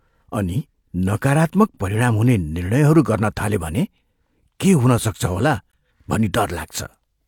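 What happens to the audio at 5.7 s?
Right at 5.72 s the speech drops out for a split second: that's a gap between stream segments. The timestamps on two adjacent segments don't quite line up, leaving roughly 17 ms unaccounted for, and the player just pads that with silence. You hear a tiny, hard-edged hole punched into the sound rather than a fade. Nothing is actually missing, though; the audio on either side is simply pushed apart. The timing fits segments about 4 s long.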